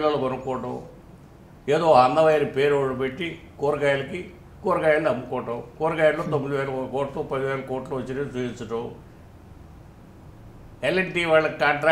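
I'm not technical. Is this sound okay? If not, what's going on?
Yes, it's fine: nothing in it glitches, drops out or sounds broken, so there's nothing here to worry about.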